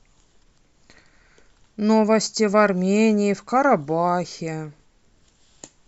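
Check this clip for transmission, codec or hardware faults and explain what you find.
I found no transmission, codec or hardware faults in this clip.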